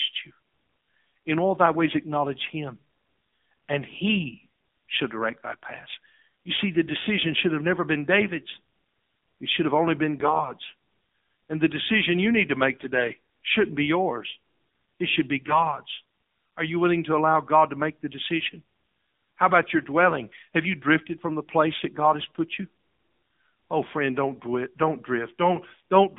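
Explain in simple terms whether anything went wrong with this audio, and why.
The whole recording sounds thin and boxy, like an old mobile phone call: the voice is buzzy and synthetic, with nothing bright or airy in it. That is the AMR narrowband mobile codec, the speech compression used on 2G and 3G calls. It keeps only a narrow band of the voice, roughly 200 Hz to 3.6 kHz here, and rebuilds speech from a simplified model of the throat and mouth, which is where the artificial buzz comes from.

In four short moments the voice suddenly turns hoarse and gargly while keeping roughly the same pitch and loudness: 10.20 to 10.52 s, right after "should have only been"; 12.72 to 13.09 s; 15.40 to 15.72 s, right after "yours it should be"; and 18.46 to 18.55 s, right after "to make the". These are AMR bit errors. Some of the less important data in the call got corrupted on the way, so the rebuilt voice came out scratchy for a moment.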